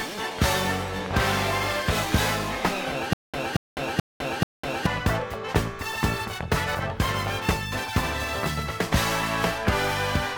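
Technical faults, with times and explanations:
3.13–4.86 s, stutter with silent gaps: the same 229 ms burst repeats four times, each followed by about 203 ms of dead digital silence, on an even 433 ms cycle, likely a stalled stream replaying its last fragment. Unlike a plain dropout, the fragment returns identically; unlike a seamless loop, silence separates each return.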